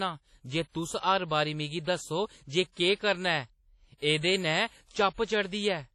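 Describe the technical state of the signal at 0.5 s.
At 0.5 s, as throughout, the speech shows heavy damage, likely WMA compression. Long-block quantisation smears ringing, breathing hiss around the sound, unlike a clean low-pass, and nothing remains above 13.2 kHz.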